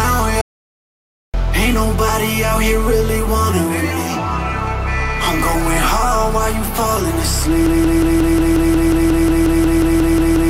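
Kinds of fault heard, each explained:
Audio dropout to silence: At 0.41 s the sound cuts to total silence for about 0.93 s, likely a lost input link, with no room tone left.
Broken-record loop: From 7.66 s to the end, a 0.18 s fragment repeats exactly, back to back, likely from a stalled stream resending its last buffer.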